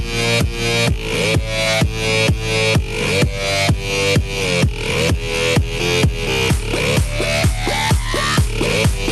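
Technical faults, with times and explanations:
Nothing stands out here; the audio comes through a call path with the high end rolling off around 12 kHz, which is just how that route carries it, and there's nothing to flag.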